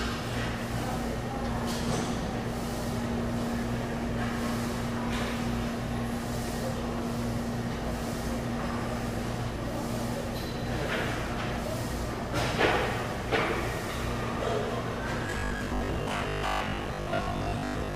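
From 15.27 s to 17.95 s the audio takes on robotic sound from repeated short buffers: a rigid, metallic buzz fixed at 50 Hz overlays the material while its broad shape still comes through. The likely cause is audio arriving too slowly, with playback filling each gap by looping the most recent fragment. A 50 Hz buzz fits a repeated segment of about 20 ms, and roughly half of the sound in this stretch is repeated in place of new audio.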